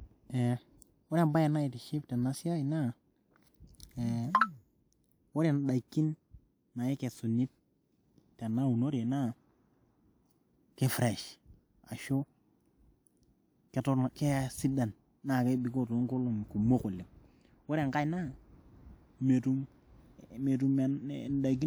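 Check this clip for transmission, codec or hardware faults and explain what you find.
No transmission, codec or hardware faults are audible here.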